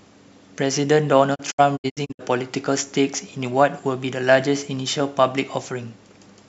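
A digital broadcast dropout breaks up this speech clip from 1.34 to 2.21 s: the receiver stopped getting valid frames and muted, with 20 ms fades into several short holes totalling 320 ms, the longest 64 ms, so the programme audio in those gaps is lost.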